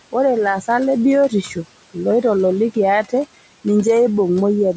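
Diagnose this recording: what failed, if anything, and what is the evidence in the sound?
Call processing is the culprit: noise suppressor artifacts run the whole way through, with the room noise pulled down about 18 dB between phrases.

Same stage again: the noise suppressor cut speech from 1.29 to 1.57 s, just before "loitololiki ate", dipping up to about 11 dB and swallowing roughly a tenth of a second.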